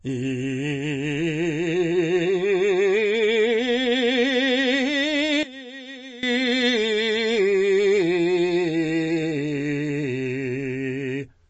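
From the start, the music carries plainly audible damage that is most likely MP3 compression at a very low bitrate, which fits roughly 32 kbps. Everything above 8.3 kHz is gone, so the treble sounds dull, and the thin upper detail that remains swirls and warbles as weak frequency lines drop in and out from frame to frame. On a spectrogram this shows as a flat ceiling at 8.3 kHz with speckled, patchy energy below it.

From 5.43 to 6.23 s, a fault that is likely one channel inverted makes the mono-summed sound collapse by about 18 dB. Material shared by both channels cancels, leaving only the faint difference between them. This is a polarity reversal, so the two channels work against each other wherever their content matches. On a waveform the mono sum shrinks abruptly for those 0.8 seconds, and a spectrogram shows the whole band fading together rather than any single region.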